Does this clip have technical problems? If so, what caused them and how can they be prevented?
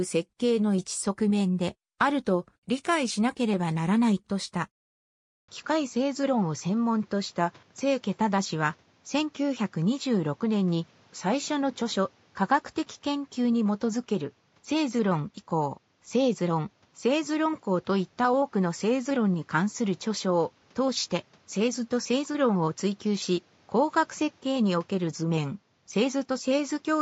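Yes. At 5.40 s the recording system likely switched to a poorer input device. After an 80 ms gap, the sound loses everything above 7.6 kHz and turns duller, with a new noise floor about 35 dB down, while the level stays much the same. To prevent it, lock the input device before recording and disable automatic switching.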